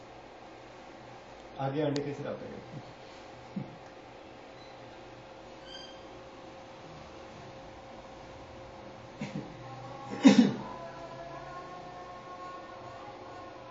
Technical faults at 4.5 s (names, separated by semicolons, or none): none